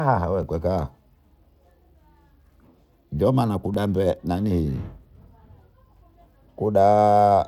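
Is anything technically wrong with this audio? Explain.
Yes. At 0.43 s and 3.74 s a repeated buffer occurs: delayed data made the device replay the last 5.3 ms block once, which fits a 256-sample buffer. Each is heard as a brief click with no audio missing, unlike a dropout's silent gap.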